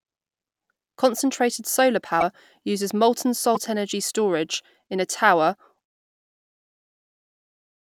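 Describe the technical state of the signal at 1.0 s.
At 1.0 s the speech signal is intact, with no fault to be heard at that point.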